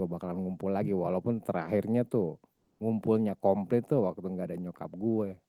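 From 2.53 to 2.79 s, comfort noise replaces the background: a steady, featureless hiss about 8 dB off in level, not a gate's silence. The likely cause is discontinuous transmission, such as Opus DTX.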